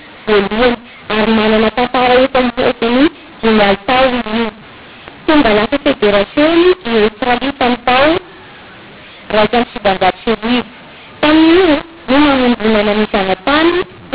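From start to finish the speech carries a mu-law and A-law mix-up: samples coded with A-law are decoded as mu-law, so each 8-bit code word maps to the wrong level. Loud and soft passages come out scrambled and harsh, and the pauses fill with hiss because near-silent codes decode well above zero. On a waveform the gaps show a thick noise floor. A spectrogram shows broadband distortion smeared through the pauses, still stopping at 4 kHz from the telephone coding.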